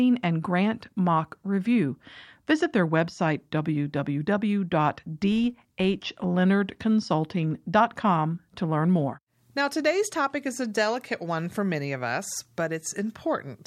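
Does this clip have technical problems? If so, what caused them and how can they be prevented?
Yes. From 5.22 to 6.31 s a filter restarted on every block, losing its state so each block starts with a small transient, heard as a 50 Hz buzz whose level follows the speech, unlike steady mains hum. Carrying filter state across block boundaries prevents it.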